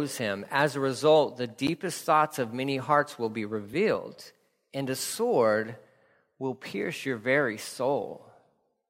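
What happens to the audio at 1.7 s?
At 1.67 s, just after "a result the" and before "thoughts of many hearts", the speech drops into a block of digital silence. It lasts about 12 ms, which fits a 512-sample buffer. The sound cuts out and back with no fade. The effect is a tick or dip rather than an audible hole. The cause is most likely an output buffer that was not filled in time.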